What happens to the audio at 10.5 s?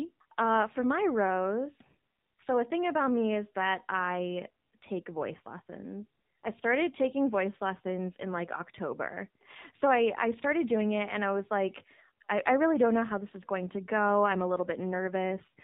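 At 10.5 s the speech carries the AMR narrowband mobile codec, present throughout: a spectrogram shows everything cut above 4 kHz, and the buzzy, synthetic tone fits a low rate around 7.4 kbps.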